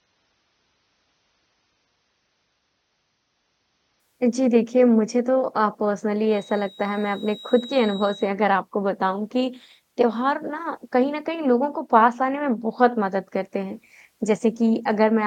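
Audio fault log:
0.00–4.00 s, adaptive stream starting at a low bitrate: the opening speech sounds dull and smeared, with nothing above about 6.3 kHz and a coarse, swirly edge on consonants, then at 4.00 s it brightens abruptly without any break. The player began on a cheap rung of the stream, which points to AAC-LC at about 24 kbit/s, so the encoder threw away the treble; once throughput was measured it switched to a richer version, which fits roughly 96 kbit/s.
6.23–8.35 s, feedback whistle: a thin, steady tone near 3.8 kHz sits well under the speech, around 20 dB down, swelling and fading slowly in strength for about two seconds before it disappears. The likely cause is a loudspeaker-to-microphone loop with gain just short of instability, so one frequency keeps recirculating and ringing without growing into a full howl, holding at a faint level instead.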